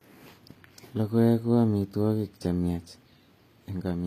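From start to finish, the upper range of the speech sounds bright but synthetic. Sibilants come out gritty and metallic, sometimes close to a lisp, and the treble does not sit naturally on the lower voice. This is likely HE-AAC compression at a low rate, which fits a bitrate of about 24 kbps. The codec keeps only the lower spectrum and fills in the top by spectral band replication, copying lower bands upward under a coarse envelope, so the harmonics above the crossover no longer line up.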